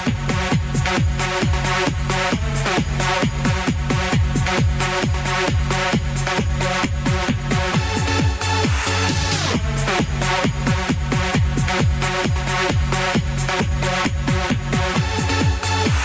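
Gain pumping runs through the whole recording. The level drops by around 10 dB the moment a loud sound arrives, and recovers again once it passes. The likely cause is an input gain set far too high for the microphone, with a fast limiter or compressor clamping down on every peak. Loud and quiet passages sit unnaturally close in level, giving a squashed, breathing quality, heard through the call microphone path's band limit of 8 kHz.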